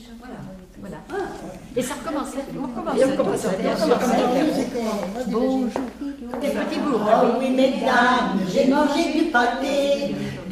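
At 6.41 to 6.46 s the sound jumps forward abruptly, marked by a brief blip, and then carries on from a later point without any pause. The likely cause is a stream segment skipped: one chunk of the segmented stream failed to arrive and the player moved straight on to the next. Unlike a dropout or buffer underrun, which inserts silence or a stall before resuming where it left off, this leaves no gap in time. Material is simply missing.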